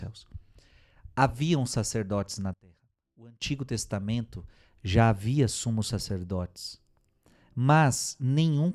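Right after "sacerdotes na", from about 2.54 to 3.42 s, the speech suddenly drops by about 23 dB and goes faint, which sounds like one channel inverted: with one side's polarity likely flipped, the centred content cancels in the mono sum.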